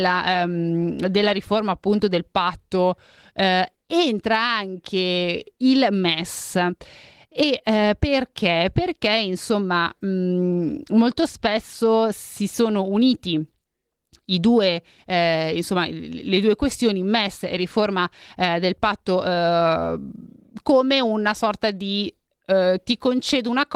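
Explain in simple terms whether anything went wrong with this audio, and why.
Nothing went wrong with this audio, as there is no fault to be heard anywhere in it.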